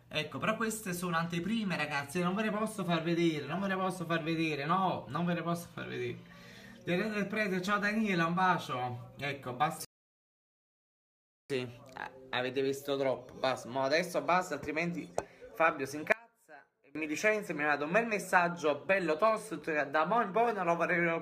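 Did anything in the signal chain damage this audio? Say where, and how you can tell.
Yes. At 9.85 s the sound cuts to silence and stays silent until 11.50 s. When it returns, it picks up exactly where it stopped. No material is missing, but about 1.65 s of dead air is inserted. That is a rebuffering stall at the playback stage. The player's buffer ran dry, so output halted until enough downloaded data arrived to continue. The added time, with nothing skipped, is the tell.

From 16.12 s to 16.95 s the level collapses by about 27 dB. What remains is a faint residue of the original. The likely cause is one channel inverted, probably a polarity flip in wiring or processing. When the two channels are summed to mono, the content they share cancels. Only their small difference survives, which explains the deep drop in level.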